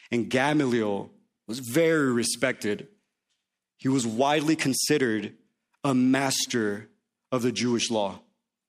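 No technical faults can be heard at any point in this speech recording.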